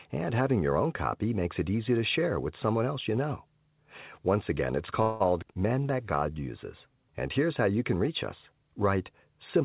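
After "again it's", from 5.02 to 5.22 s, a call audio freeze stretches the last sound into a fading buzz for 181 ms, likely from an emptied jitter buffer. Unlike a dropout, speech resumes exactly where it stopped, with nothing skipped.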